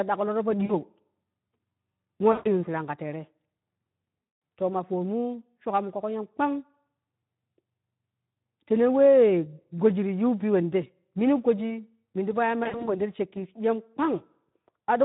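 The whole clip runs through the Speex codec, and the damage is plainly audible. It's a low-rate CELP setting, roughly what you'd expect around 11 kbps. There aren't enough bits for the excitation, so the speech comes out hoarse and grainy, with a noisy edge. Anything up top above 8 kHz is just a shaped noise fill rather than real detail.

Then there are four spots of VoIP packet loss concealed by the speech codec. The first, at 0.65 s, is short, about 40 ms missing. The second, at 2.31 s, loses 140 ms. The third, at 4.21 s, loses 200 ms. In each one the decoder keeps repeating its last pitch and filter at falling gain, so you hear the gap stretched into a buzzy tone or a coloured noise that fades out, and the voice stays thin for a moment after it resumes. The last comes right after "min ti po ye" at 12.63 s. It's 120 ms of losses scattered over about 240 ms, with the longest gap 60 ms, so it sounds like a stuttery, smeared patch rather than one clean dropout.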